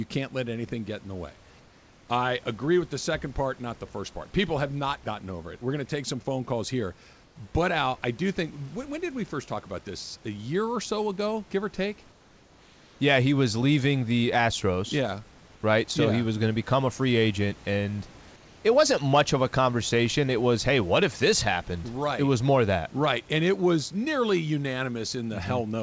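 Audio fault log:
7.24–7.36 s and 12.12–13.00 s, comfort noise in place of the background: the sender likely stopped transmitting during pauses, so a steady, featureless noise about 2 dB quieter briefly replaces the room's real background.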